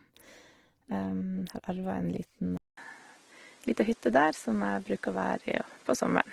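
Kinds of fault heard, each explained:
Opus compression: Throughout the clip, the speech sounds rough, grainy and noisy rather than swirly. Its full bandwidth stays intact. This points to a low-rate codec filling starved bands with noise, likely Opus in music mode, which fits about 16 kbps.
Input switched to a poorer device: After "arva en", at 2.57 s, there is a 200 ms silence. The sound then turns duller, with nothing above 11.4 kHz, and gains a new noise floor roughly 30 dB down. Loudness barely changes. The likely cause is a switch to another microphone.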